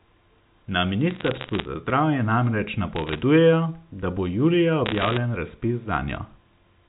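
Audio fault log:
1.11–1.68 s, 2.96–3.21 s and 4.86–5.18 s: bit errors on a digital phone line. Bursts of sharp ticks and crackle sit over unchanged speech. The first comes just before "za zdravje namreč", the second just after it, the third after "da bo julija". Each flipped bit corrupts one 8-bit telephone sample. A hit on the sign or a high bit throws that sample far off, which gives a click. About one bit in 200 is wrong at first, rising to about one in 100 in the last burst.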